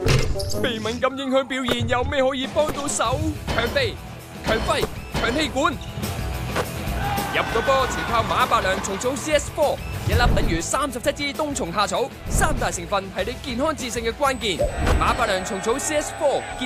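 USB microframe current leaks in through power or ground from 14.33 s to the end, producing USB whine: a fixed 8 kHz tone roughly 25 dB below the sound.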